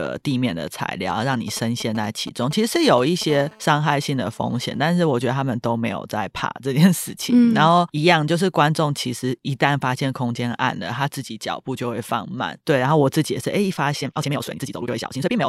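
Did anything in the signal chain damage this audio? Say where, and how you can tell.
Yes. From 1.10 to 3.24 s, GSM signalling bursts enter through the analogue wiring. A nearby 2G phone's radio pulses are rectified into a galloping train of brief 217 Hz buzzes, roughly 15 dB below the speech. A spectrogram shows clustered vertical stripes with harmonic combs, and the waveform shows periodic spikes.

From 3.30 to 5.04 s, GSM phone buzz follows, also picked up in the analogue wiring while the phone holds a call. It is a steady, raspy 217 Hz buzz about 26 dB below the speech. On a spectrogram it appears as evenly spaced horizontal harmonic lines, and on the waveform as a regular pulse-like ripple.

From 13.99 s to the end at 15.48 s, the speech runs at double pace with unchanged pitch, a time-stretched section. The cause is likely software stretching at the editing or storage stage, which drops short pieces to squeeze duration. 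It sounds rushed, and the pace change is abrupt while the pitch stays the same.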